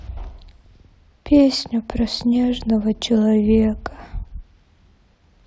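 No technical faults are audible.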